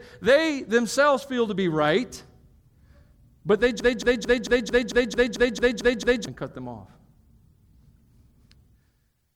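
From 3.80 to 6.27 s the speech falls into a broken-record loop: one 223 ms fragment repeats exactly, eleven times back to back, likely because playback or the stream stalled. The speech that belonged there is lost. A waveform or spectrogram shows identical blocks tiling evenly.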